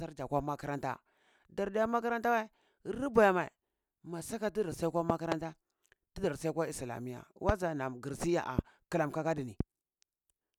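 Loud pops break into the speech four times. Just after "saka tizi si yakwa", a double pop spans 5.10 to 5.34 s, then single pops follow at 7.49 s, at 8.59 s between "naan gir si" and "klan kakaduni", and at 9.60 s after "klan kakaduni", each roughly 20 dB above the speech, the last nearer 15 dB. A voltage pulse, likely from a switch, static or a driver glitch, sits on top of the signal. Unlike a dropout, the speech carries on underneath.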